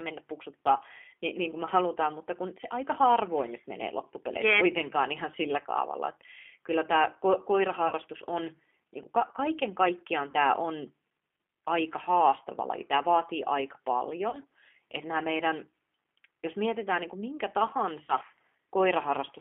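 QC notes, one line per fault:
Throughout, G.729 codec: speech sits in a narrow 300 Hz to 3.4 kHz telephone band with plainly audible rough, synthetic texture from 8 kbit/s pulse-based reconstruction. Unlike simple band-limiting, the voice itself sounds rebuilt, with a slightly buzzy, processed grain.
7.88–7.93 s, 10.31–10.34 s (after "kaiken kaikkiaan", before "tämä on"), 14.30–14.38 s (after "vaatii aika") and 18.06–18.13 s (after "mietitään niin kuin minkä"), VoIP packet loss concealed by the speech codec: about 30 ms of audio, which fits three lost 10 ms frames, is replaced by a stretched, fading buzzy tone or coloured noise extrapolated from the last pitch. Unlike a dropout, there is no silence, and the voice stays weak briefly after it resumes.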